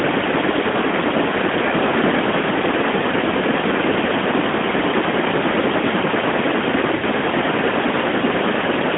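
Lost AMR speech frames at 6.96–7.03 s: the decoder stretched the last good frame's settings with falling gain for 60 ms, so the speech briefly smears and dips.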